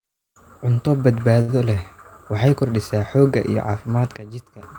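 A speech clip in which a late packet left the jitter buffer empty at 1.41 s, producing a short stall: the receiver held the last sound for about 69 ms until 1.50 s, then resumed without losing anything. At 4.17 s a sudden gain jump, likely an unramped digital gain change, drops speech and background noise together by about 15 dB until 4.63 s.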